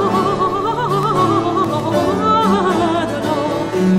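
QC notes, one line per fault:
1.03–1.95 s: CD scratch ticks. Seven short ticks run through this stretch, each lasting no more than about two milliseconds. A scratch or blemish on the disc removes more data than the player's error correction can rebuild, and it does this once per revolution as the damaged patch comes back under the laser. Each time, the player either fills the gap with interpolated samples or mutes it briefly. That leaves a regular pattern of clicks or tiny dropouts instead of a continuous noise.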